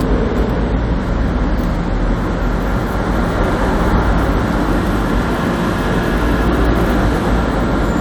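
No technical faults can be heard at any point in these sounds.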